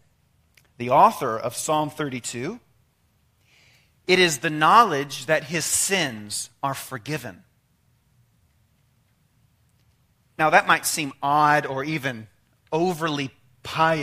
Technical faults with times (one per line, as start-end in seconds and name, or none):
11.10-13.60 periodic USB or driver dropouts